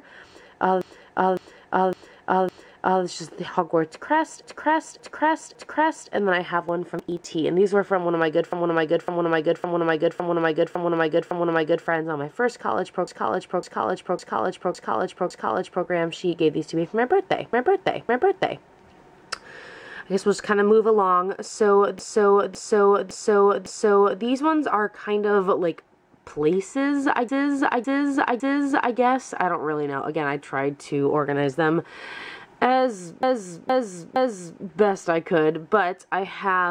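A run of compressed frames was written or sent more than once, so the decoder plays the same slice of sound again. These repeated frames begin at 0.82 s, where a block of about 0.56 s is played four extra times through 3.04 s, making a stutter. The same thing happens at 4.44 s, with three extra plays through 6.11 s.

Between 6.69 and 7.34 s the processor falls behind on its small audio buffers, and the sound points to roughly 10 ms buffers, about fifteen of them skipped outright. This processor overload crackle is heard as a short burst of gritty tearing: each skipped buffer leaves a hard-edged gap in the sound, and the gaps fuse into crackle that stops once the load eases.

The repeats resume with the same 0.56 s block: six extra plays from 8.52 to 11.87 s, five from 13.08 to 15.86 s, two from 17.53 to 18.65 s, four from 21.99 to 24.22 s, and three from 27.29 to 28.96 s. At 33.23 s a shorter block of about 0.46 s repeats three extra times through 34.62 s. 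Each loop stretches the audio by the repeated time, up to about 3.3 s in the longest run.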